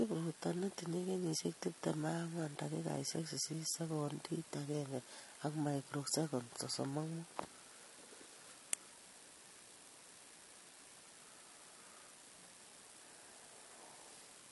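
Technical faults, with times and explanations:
Throughout, transcoding between lossy codecs: the speech was likely encoded several times in a row, and the layered artefacts fit an MP3 stage around 48 kbit/s, then HE-AAC near 32 kbit/s, then a final AAC-LC encode. Each later encoder wastes bits reproducing the artefacts left by the one before and adds its own, so the different kinds of artefact are heard together. The narrowest band in the chain persists, with nothing above 11.5 kHz.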